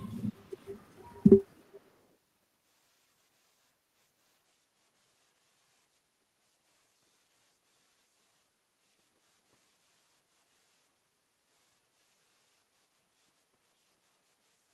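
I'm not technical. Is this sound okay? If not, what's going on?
No. There is echo leak at 0.6 to 0.83 s, 1.01 to 1.26 s and 1.74 to 1.8 s: faint copies of the speech about 0.4 s late, likely from a loudspeaker echo that was not fully cancelled.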